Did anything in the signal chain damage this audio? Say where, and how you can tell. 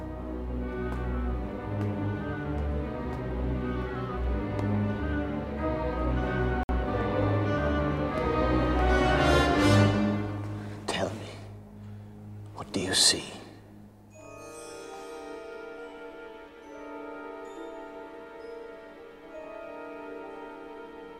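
Yes: at the wireless playback link, around 6.63 to 6.69 s, the sound drops to about 57 ms of dead silence and then resumes cleanly, the likely mark of a Bluetooth stall, where the receiver's buffer emptied while delayed packets were resent. Unlike a codec dropout, nothing is smeared, concealed or glitched.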